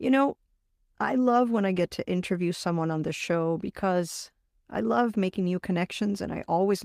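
Speech recording, no technical faults detected at any point.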